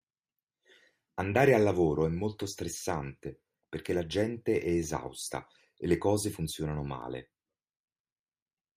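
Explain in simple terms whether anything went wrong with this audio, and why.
At 7.02 s, just after "e le cose funzionano", there is a repeated buffer. New audio arrived late, so the device replayed its last tiny chunk, about 1.3 ms, twice more. The hard joins make a brief click, consistent with a 64-sample buffer, and essentially nothing was lost.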